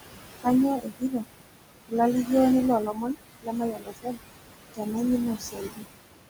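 Noise suppressor artifacts run through the whole clip: the room noise, only about 9 dB under the speech, is pulled down by about 21 dB in the gaps and swells back beneath each phrase. Unlike a gate, it pumps rather than snapping shut.

Speech cut by the noise suppressor follows at 0.77–1.24, 2.86–3.17, 3.41–4.18, 4.74–4.95 and 5.38–5.85 s, where quiet speech is mistaken for noise and dips by about 11 to 22 dB. These parts sound swallowed rather than clipped or dropped out.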